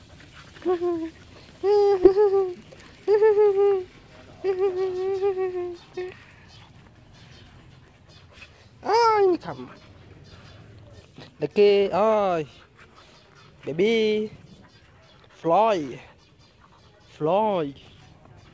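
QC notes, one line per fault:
2.04–2.14 s, skip ahead: about a second of audio is missing. Playback jumps straight from before the break to audio that was already waiting, with nothing filled in. That stretch was dropped in transit or by the jitter buffer, so both sides join almost directly.
2.63–3.23 s, jitter buffer speed-up: the audio runs at 109% speed at the same pitch, so it sounds hurried. The buffer held more audio than its target, and the receiver cut short pitch-period pieces many times in a row, roughly 70 ms in all, to shrink the delay.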